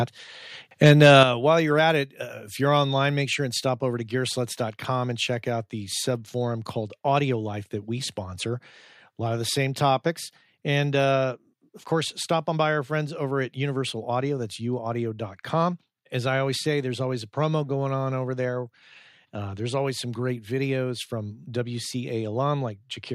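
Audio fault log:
0.85–1.23 s, microphone overload: The loudest syllables just before "while you're at it" take on a harsh, crackling edge, with peaks driven about 3 dB past the converter's limit and a small fraction of samples flattened at that limit. The likely cause is an input gain set too high, so the converter runs out of headroom and squares off the waveform tops, adding the gritty harmonics heard on those peaks.
1.23 s, microphone volume stepped down: Immediately after the distorted stretch and right before "while you're at it", the whole signal, voice and background together, drops by about 7 dB in a single step. Because the change is instantaneous rather than a smooth fade, it registers as a sudden shift in loudness. This is likely the call software reacting to the clipping by lowering the device's input volume.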